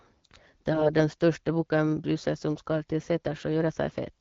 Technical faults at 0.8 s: AMR bit errors

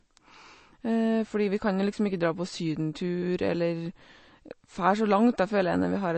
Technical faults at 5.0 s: MP3 compression

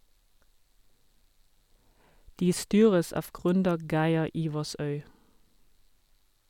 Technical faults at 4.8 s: none

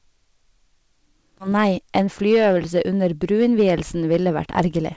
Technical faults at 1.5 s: hard clipping; skip ahead; jitter buffer speed-up

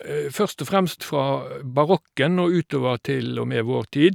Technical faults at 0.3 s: none

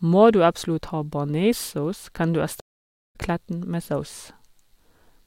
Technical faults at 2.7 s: stream reconnect

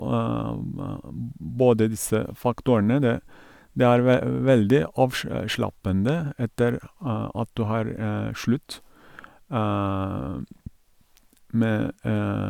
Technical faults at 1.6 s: none

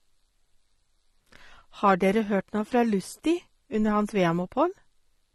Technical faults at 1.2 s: AAC compression

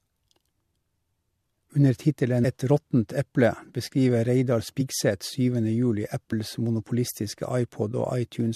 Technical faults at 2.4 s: compressed frames skipped

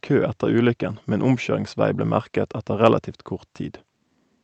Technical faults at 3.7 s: none

